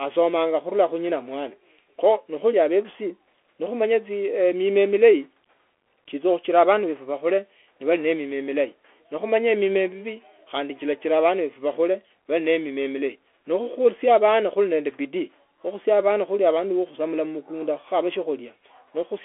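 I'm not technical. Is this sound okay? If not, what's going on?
No. From start to finish this speech has passed through a Bluetooth CVSD headset codec, the basic system wireless headsets use for calls. It squeezes the voice into a narrow phone-like band, roughly 300 Hz to 3.4 kHz, with nothing above about 3.8 kHz, so it sounds thin and muffled. Unlike a plain phone line, it adds a grainy hiss under the voice, turns s sounds scratchy, and makes loud high sounds distort.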